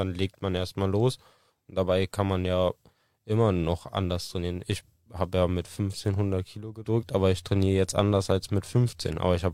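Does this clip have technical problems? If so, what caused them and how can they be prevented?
No, nothing in this speech recording points to a technical problem. With no fault to trace, there is no cause to identify and nothing that needs preventing.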